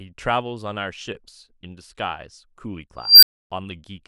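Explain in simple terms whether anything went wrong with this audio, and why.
Something went wrong at 2.98 seconds. An unstable filter made a high squeal, around 5 kHz, swell up over about a quarter of a second and clip. The filter's numbers then overflowed, so the speech cut out for roughly 0.28 seconds, ending near 3.5 seconds.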